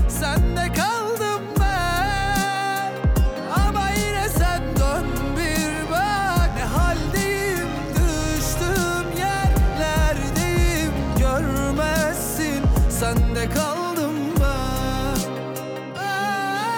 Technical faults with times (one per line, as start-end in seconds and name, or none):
5.65-13.15 mains buzz